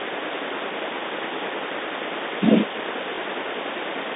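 At 3.16 to 3.18 s there is a brief packet loss with the last packet repeated. About 20 ms of audio went missing, consistent with a single lost packet, and the receiver replayed the previous stretch in its place. It gives a small blip in the speech. On the spectrogram, the speech sits within the telephone band, which runs from 300 Hz to 3.7 kHz.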